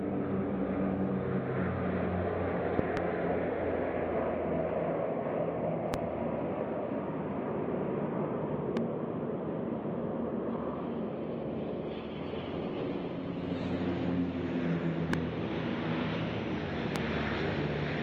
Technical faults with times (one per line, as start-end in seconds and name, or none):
2.79-2.99 loud pop
5.94-5.96 loud pop
8.77-8.79 loud pop
11.78-13.78 adaptive stream at a lower bitrate
15.13-15.16 loud pop
16.96-16.98 loud pop